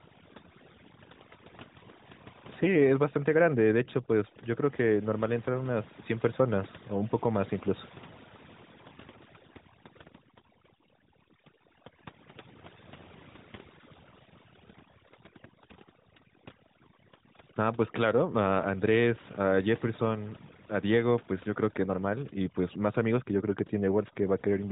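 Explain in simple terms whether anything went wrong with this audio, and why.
Something did go wrong here, and it runs the whole way through: overdone noise removal. A noise-cleaning tool was set too aggressively, so it keeps switching off slices of the sound it mistakes for hiss, and the quiet edges of the speech get swallowed along with them. That's why the background drops to an odd near-silence with little twinkly specks. The phone-line sound, with nothing above 3.8 kHz, is just the mobile AMR narrowband codec at work.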